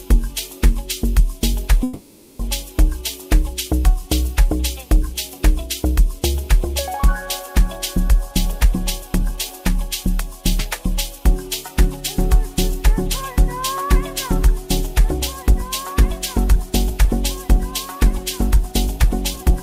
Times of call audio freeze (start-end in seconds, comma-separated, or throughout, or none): 1.83-2.41